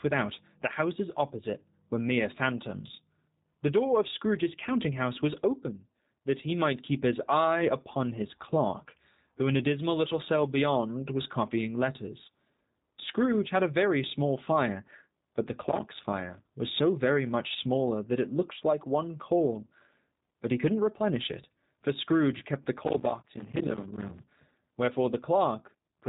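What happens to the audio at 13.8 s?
At 13.8 s the speech sounds slightly rough and synthetic, with a buzzy edge, and it is plainly band-limited: nothing above 4 kHz comes through, so sibilants and breath lose their air. This is G.729 codec damage present across the whole clip, not a local event. The coder, which sounds like G.729A at 8 kbit/s, rebuilds each 10 ms frame from a vocal tract filter, a pitch predictor and a few pulses.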